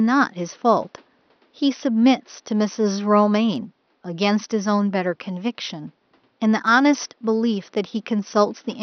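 No technical faults are audible in this speech recording; the only background is the room's own ambient noise, sitting about 42 dB below the speech.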